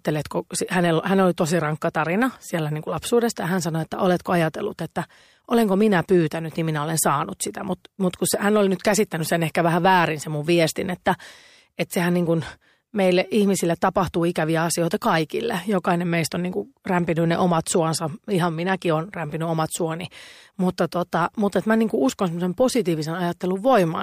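From 15.65 to 19.22 s, one channel runs late by roughly a single sample, a few hundredths of a millisecond, before both are summed to mono: a channel delay causing comb filtering. The first notch falls near 20 kHz, so the speech loses some airy top end and sounds slightly dull.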